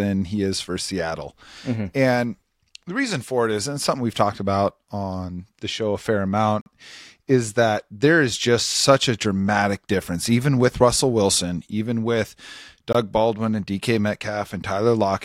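A block of digital silence falls at 6.61 to 6.66 s, after "the show a fair", and again at 12.93 to 12.95 s, after "even with". Samples were zeroed, so the speech drops out abruptly for about 47 ms, then 20 ms.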